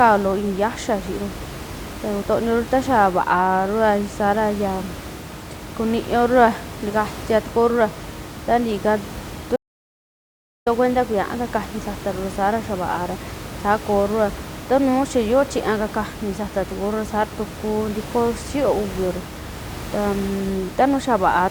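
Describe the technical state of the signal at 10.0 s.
At 10.0 s there is an audio dropout to silence, from 9.56 to 10.66 s. The input was likely lost while silence kept being written. Speech cuts off and even the room noise vanishes.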